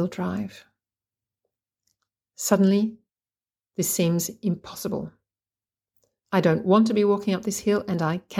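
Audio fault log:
The speech signal shows no technical faults anywhere in the recording.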